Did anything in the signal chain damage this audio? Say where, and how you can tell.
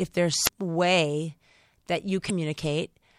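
Yes. The damage is at the codec stage: damaged data in a compressed stream. At 0.43 to 0.49 s and again at 2.26 to 2.31 s the speech is briefly disrupted, roughly 50 ms and 45 ms each time. Corrupted bytes in those frames made the decoder misread them, lose frame sync and hunt for the next valid header before locking back on.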